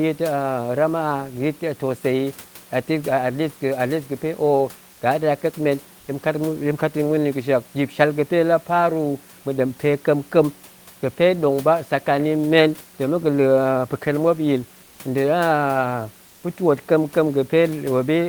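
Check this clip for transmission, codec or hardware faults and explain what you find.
Two short patches of comfort noise in place of the background, both in pauses in the speech: 14.83 to 14.95 s, and 16.27 to 16.39 s, just before "pa̱ twoot kamkem". Each lasts 120 ms. The real room noise, sitting about 28 dB under the speech, drops out and is replaced by a flatter, featureless hiss about 1 dB quieter. The likely cause is Opus DTX, where the sender goes quiet in pauses and the receiver fills the gap with synthetic noise.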